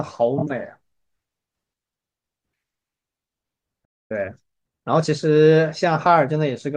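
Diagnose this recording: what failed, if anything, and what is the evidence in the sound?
Repeated frames at the codec or storage stage: around 0.37 s a 24 ms block, which fits a single compressed frame, plays twice more, adding 48 ms and a short stutter.

Playback stall: the sound cuts out mid-flow from 3.84 to 4.11 s, roughly 250 ms of silence, likely because the player's buffer ran dry before resuming.

Time-compressed catch-up in playback: from 4.11 to 5.11 s the player trims its backlog, so the speech runs hurried at 1.25 times speed while keeping normal pitch.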